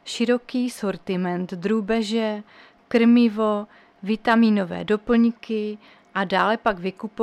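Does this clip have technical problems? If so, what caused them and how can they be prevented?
No, no technical problems can be heard here.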